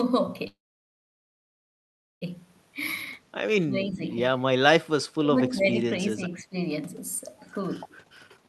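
From 0.47 to 2.23 s the sound stops, trails off briefly, then sits silent for about 1.7 s before resuming where it left off. This call audio freeze likely comes from delayed packets draining the jitter buffer.

At 3.66 to 4.03 s, 5.21 to 5.38 s and 6.08 to 6.57 s the speech dips by about 10 dB in brief patches. This is likely speech suppressed in double talk, where the echo canceller turned down the talker while the far side spoke.

From 7.91 s to the end the speech runs hurried, about 133% speed at unchanged pitch. This jitter buffer speed-up trims roughly 200 ms of pitch periods to shed excess delay.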